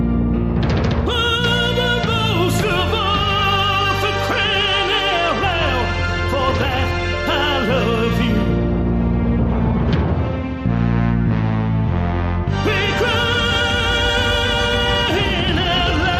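No technical faults are audible.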